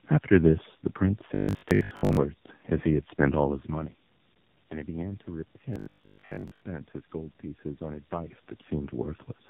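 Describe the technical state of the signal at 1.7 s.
At 1.7 s the sound has robotic sound from repeated short buffers, running from 1.35 to 2.17 s. A rigid 50 Hz buzz fits a 20 ms stretch being replayed, likely because new audio arrived too late, so most of it is skipped. A fixed buzz pitch separates this from codec warble.

Tandem speech coding is present as well, throughout the clip. The audio passed through two narrowband speech coders in series, consistent with AMR-NB on both ends. Nothing is heard above 4 kHz. The compounded roughness and muffling is steady, unlike the brief buzz.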